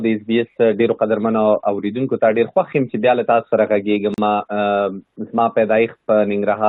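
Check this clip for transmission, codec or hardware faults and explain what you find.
There is one fault, a short dropout where two separately encoded pieces meet.

Gap at a join of encoded pieces, 4.14 to 4.18 s: the audio was encoded in sections and butted together untrimmed, so the encoder's start-up delay and the padding on the final frame of the earlier piece both remain as dead air. That leaves a silence of about 39 ms cutting into continuous sound, with smeared edges, after which the sound resumes exactly where it broke off.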